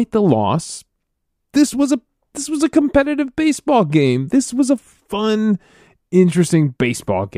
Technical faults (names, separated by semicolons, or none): none